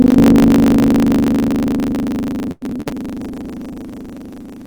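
Buffer tearing runs through the whole clip as a steady rattling buzz at 25 Hz, heard only while sound is present. The program filling the playback ring buffer and the hardware draining it have drifted out of step, so they cross inside each period, which points to a period of about 40 ms. Roughly a third of every period carries audio from a lap earlier, well over a tenth of a second old, with hard seams on both sides producing the buzz.

Repeated packet loss (robotic sound) appears from 2.51 to 2.95 s. Over that stretch the stream keeps losing or receiving packets too late, and each hole is patched by stretching the last received sound forward before the next hole arrives. Close to half of the span is concealment, with a series of gaps, the longest about 0.1 s. The result is a choppy, robotic texture with fragments of the audio missing outright.

A call bitrate drop begins at 3.21 s and lasts until the clip ends, nearly 1.5 s later. 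The call's bandwidth estimate fell and the encoder was told to spend far fewer bits. The sound points to a fall from around 48 kbps to about 12 kbps. At that rate the Opus encoding becomes coarse and trims the upper frequencies, so the audio turns rough, watery and muffled, and it never recovers within the clip.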